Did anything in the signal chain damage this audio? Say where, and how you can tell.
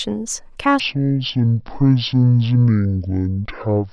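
Yes: a wrong sample rate at playback from 0.8 s onward, fitting 44.1 kHz audio played at 22 kHz, drops the speech to half speed and an octave lower.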